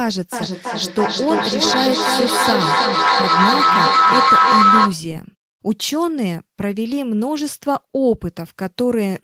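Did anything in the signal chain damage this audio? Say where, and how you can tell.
Yes. From 0.32 s to 5.08 s there is feedback howl: two devices on the same call in one room formed an acoustic loop from microphone to loudspeaker and back, with the echo path gaining level on every pass. Instead of fading, each repeat grows and narrows toward the frequency the loop favours, a tone around 1.5 kHz that rises to about 6 dB above the speech. It pulses roughly every 300 ms, the loop's round-trip delay, until it stops at 5.08 s.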